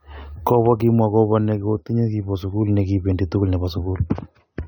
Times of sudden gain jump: none

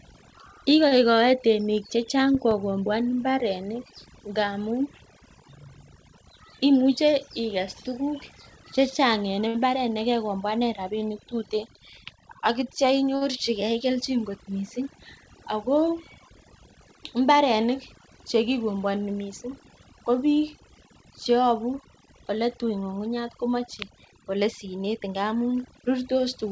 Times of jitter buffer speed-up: 22.12-24.87

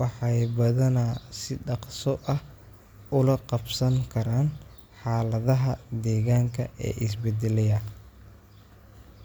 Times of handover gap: none

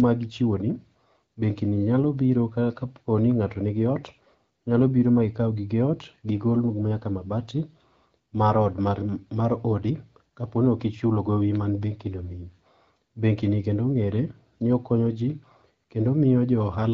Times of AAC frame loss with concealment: none

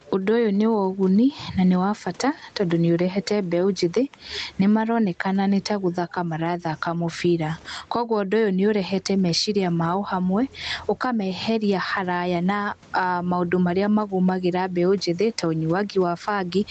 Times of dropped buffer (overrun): none

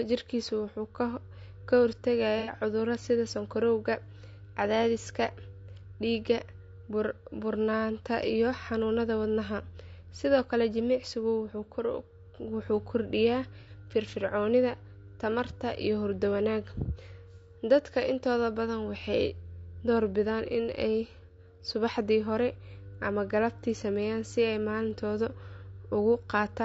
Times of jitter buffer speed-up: none

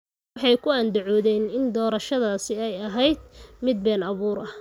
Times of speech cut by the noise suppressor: none

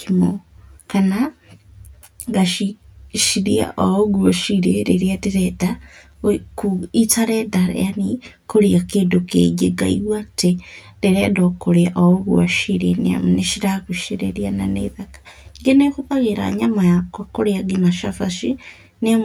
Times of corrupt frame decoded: none

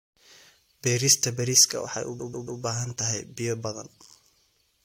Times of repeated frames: 2.18-2.60

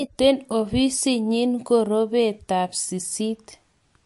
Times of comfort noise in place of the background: none

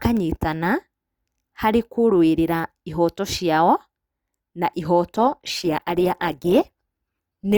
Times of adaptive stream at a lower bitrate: 5.07-7.57

